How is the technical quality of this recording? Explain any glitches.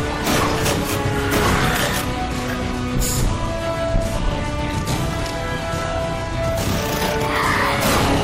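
The recording's quality is held back by audible lossy-coding damage. Throughout the clip there is plainly audible degradation consistent with MP3 compression, likely at a bitrate around 64 kbps. Short of bits, the encoder drops weak frequency components from frame to frame, leaving a watery, swirling texture with softened attacks.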